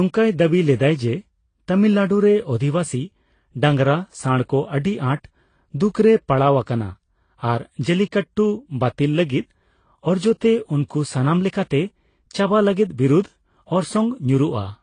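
Throughout the speech, the signal was likely passed through one low-bitrate lossy codec and then re-encoded by another, a transcoding between lossy codecs. Nothing survives above 9.8 kHz, so the sound is dull, and the two codecs' smeared, swirly artefacts pile on top of each other, which fits a Vorbis stage near 35 kbit/s followed by AAC-LC near 32 kbit/s.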